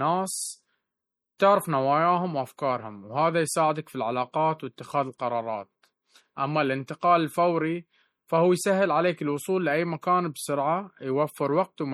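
From start to finish the speech carries plainly audible codec damage, likely from MP3 compression at a low bitrate, with the sound pointing to something near 48 kbps. With so few bits available, the encoder removes the treble above a fixed cut-off and drops quieter frequency components that flicker in and out between frames. The result is a watery, swirling texture, metallic chirping on s sounds, and consonant onsets that smear.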